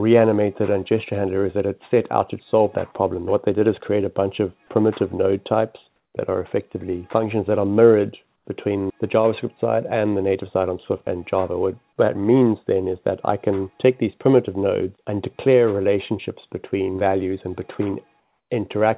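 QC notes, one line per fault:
5.96–6.14 s, 8.36–8.45 s, 18.2–18.5 s: comfort noise in place of the background. Each pause becomes steady, featureless hiss, about 4–6 dB quieter, likely discontinuous transmission substituting synthetic noise.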